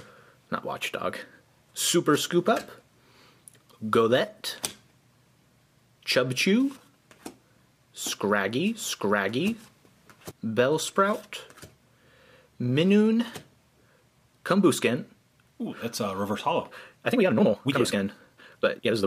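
From 8.05 to 10.31 s there's a doubled audio track: a second copy at about the same level trails roughly 0.7 s behind, starting and stopping abruptly, likely a slower capture path or misaligned edit. Then from 17.08 s to the end, a time-stretched section rushes along at 1.88 times speed with unchanged pitch, likely software squeezing it to fit a length.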